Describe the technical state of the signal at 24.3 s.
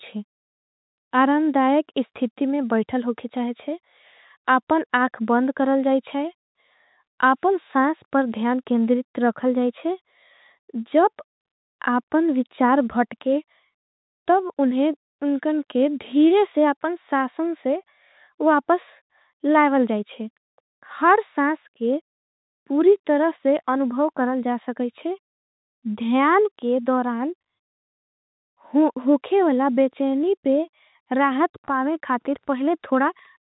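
At 24.3 s the speech is intact, with no fault at that moment beyond the normal narrow telephone band of the call path.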